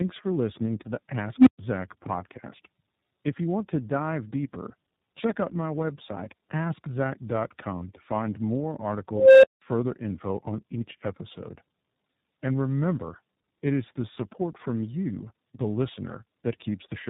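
Throughout this speech recording the sound is rough, muffled and warbly, with nothing above 3.8 kHz. That points to tandem speech coding: AMR-NB at 7.95 kbit/s, then G.711 A-law, then iLBC at 15.2 kbit/s, each coder degrading the previous one's output. At 1.38–1.59 s a tone of around 300 Hz swells over 84 ms into a loud squeal, followed by 125 ms of silence. At 9.10–9.62 s a tone near 500 Hz builds over 335 ms before a 183 ms dropout. Both events are an unstable filter, where a recursive filter's output grows without limit, clips, overflows and goes silent until it resets.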